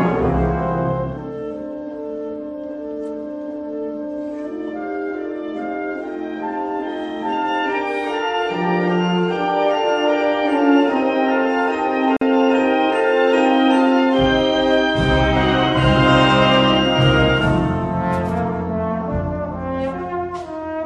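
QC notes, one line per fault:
12.17–12.21 s: gap at a join of encoded pieces. Sound drops out for 47 ms, then resumes where it stopped. Untrimmed encoder delay and last-frame padding remain at the join.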